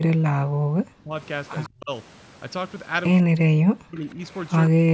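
From 0.0 to 1.14 s the speech sinks by roughly 40 dB in broken stretches totalling about a second. This is likely speech suppressed in double talk, where an echo canceller mistook overlapping talk for echo and muted it. The waveform shows collapsed envelope gaps, and the spectrogram goes dark across the band.

At 1.64 to 1.69 s a faint echo leak appears, likely uncancelled loudspeaker pickup returning 152 ms behind the speech at about 25 dB down. On a spectrogram it is a weak smeared repeat of the preceding harmonics.

The suppression returns at 1.68 to 1.91 s, dipping by about 30 dB for roughly 200 ms. It comes again at 3.2 to 4.21 s with about a second of drops near 40 dB, and from 4.68 s to the end.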